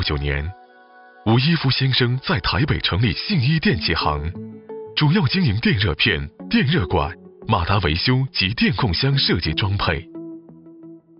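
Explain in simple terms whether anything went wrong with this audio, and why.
Nothing went wrong here; I listened all the way through and there's no problem to point out.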